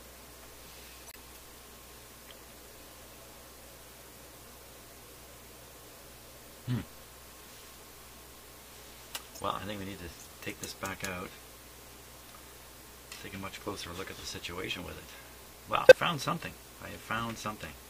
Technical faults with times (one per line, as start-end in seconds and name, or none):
1.07-1.16 corrupt frame muted
9.35-9.41 corrupt frame decoded
15.85-15.93 corrupt frame decoded